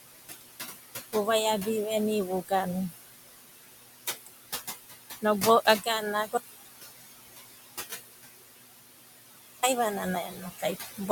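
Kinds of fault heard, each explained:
Noise suppressor artifacts: The room noise, which sits only about 7 dB below the speech, keeps dipping away in the pauses and swelling back in underneath the talking. A noise suppressor is working frame by frame across the whole clip, pulling down by about 18 dB whatever bands it judges to be steady noise, and with noise this close to the speech level those decisions keep changing.
Audio dropout to silence: At 6.37 s the sound stops dead in mid-flow and does not return until 9.63 s, a gap of about 3.3 s. That gap is silence, with even the room noise gone, and whatever was said during it is lost. The likely cause is that the input signal disappeared for those seconds, through a dropped connection or a momentary mute, while the recording carried on writing silence.
Speech cut by the noise suppressor: From 10.27 to 10.63 s, near the end of the clip, part of the speech suddenly sounds swallowed and faint, as if it had sunk back into the background for roughly a third of a second. 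Here the noise suppressor misjudged quiet speech energy as noise and turned it down along with the room sound, with the deepest dip reaching about 14 dB.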